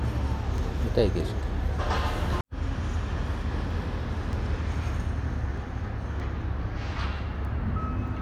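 From 0.58 s to 8.08 s, sharp word clock ticks recur about every 0.7 s, roughly fifteen in all. The receiver runs on its own clock, off by a few tens of parts per million. At each slip, one sample is dropped or repeated.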